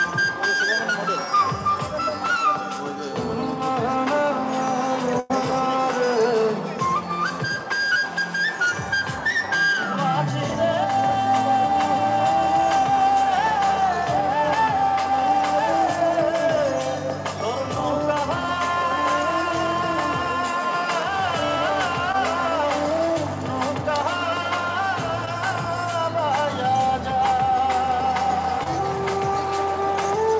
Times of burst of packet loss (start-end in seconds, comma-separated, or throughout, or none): 5.20-5.32